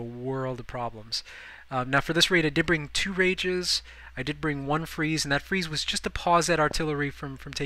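At 6.71 s a single loud pop lasting about 21 ms (to 6.73 s) sits on top of the audio, which carries on underneath it. It is most likely a brief voltage step or pulse, such as from a switch, static discharge or a driver glitch, entering the signal path. It sounds like a sharp, hard click or thump roughly 10 dB above the surrounding level. On a waveform it appears as a narrow spike towering over the signal; on a spectrogram, as a thin vertical stripe spanning the full frequency range.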